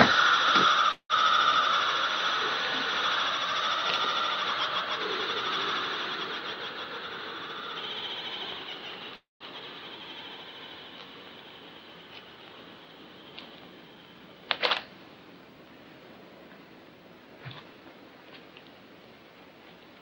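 At 0.91 to 1.12 s and again at 9.16 to 9.43 s, a call audio freeze inserts about 180 ms and then 247 ms. A fading buzz ends in flat silence (80 ms, then 170 ms), likely from packets held up in transit. It appears as a smeared band collapsing to a blank gap.

From 7.04 to 8.16 s and 16.48 to 17.82 s, a jitter buffer speed-up plays at 113% without changing pitch, trimming roughly 150 and 200 ms. It sounds hurried, and the waveform shows whole pitch cycles cut out.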